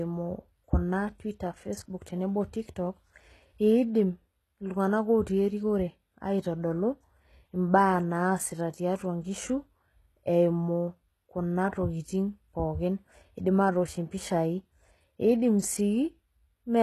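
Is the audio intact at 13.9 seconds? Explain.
No. At 13.9 seconds, as across the whole clip, the speech carries what is likely HE-AAC compression. Content stops near 12.3 kHz, and the treble above the coded band is rebuilt from copied lower bands, so s sounds come out gritty and metallic, fitting a very low bitrate around 16 kbps.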